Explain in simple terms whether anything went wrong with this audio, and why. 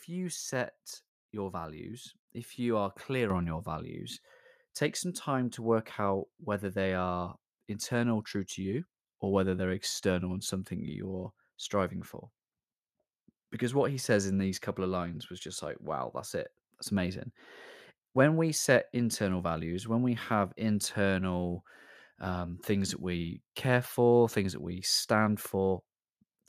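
At about 3.3 seconds the whole recording suddenly gets louder in a single jump: the speaking and the background noise behind it rise together and stay at the new, higher level. That is a microphone volume step-up. The calling software judged the microphone too quiet and turned up its input volume in one go instead of gradually. Because the boost happens at the microphone, everything it picks up gets louder at the same moment.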